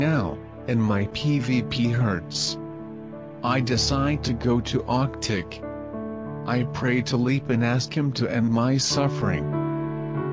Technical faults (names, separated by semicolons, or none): none